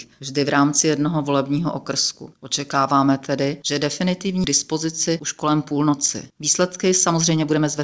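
At 4.44 s the audio jumps abruptly forward with no gap, and roughly a second and a half of material is missing. The two sides of the cut are butted straight together. This is a skip ahead: a stretch of audio was lost in transit or discarded by the jitter buffer while later audio was already queued, so playback resumed from the newer material. Shortly after, from 4.72 s to 7.81 s, the sound runs at about 112% speed with its pitch unchanged, giving a hurried feel. This is a jitter buffer speed-up. Having built up more delay than its target, the receiver trimmed out many short pitch-period-sized slices in succession, removing around 0.4 s in total to bring latency back down. Throughout, the bandwidth stops at 8 kHz, which fits a G.722 call path.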